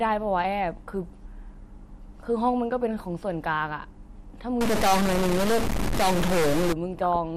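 MP2 compression affects the whole of this speech recording: the sound is dull, with a gurgling, granular roughness, and the top end comes and goes. That is likely MPEG Layer II coding at a low rate, around 80 kbps. The coder divides the signal into 32 equal sub-bands and shares out a small bit budget, so upper bands switch off and flicker while the bands that remain are quantised coarsely. The damage is plainly audible.

A stuck bit runs from 4.61 s to 6.73 s and adds distortion that follows the waveform. One bit in each sample appears fixed at 0 or 1, so about half the sample values are wrong by that bit's weight. Because that bit also flips with the sign of small values, quiet stretches fill with noise instead of staying silent. A broken data line or converter likely produced this.

DAB burbling appears from 7.0 s to 7.16 s as a short burst of burbling, which points to about eight audio frames being hit. 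Weak reception let bit errors, at a rate of a fraction of a percent, get past the error correction into the MP2 data. Corrupted samples then put short blips of noise in single sub-bands.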